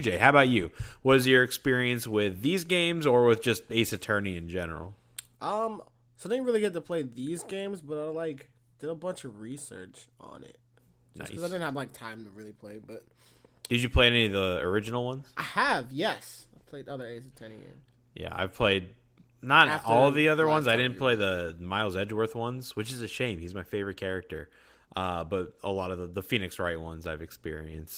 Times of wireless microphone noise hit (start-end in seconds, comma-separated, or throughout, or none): none